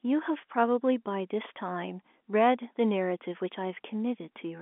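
No faults can be heard anywhere in this recording.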